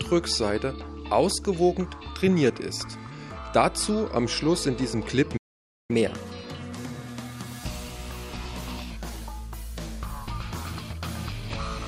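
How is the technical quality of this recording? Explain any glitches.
Two linked playback faults disrupt the middle of the recording.

At 5.37 s a playback stall cuts the sound for about 0.52 s, likely the player starving for data; unlike a dropout, it resumes where it stopped.

From 5.91 to 8.91 s a catch-up at higher speed runs 1.1 times fast, raising pitch by roughly a semitone and a half, then settling back, which distinguishes it from constant speed drift.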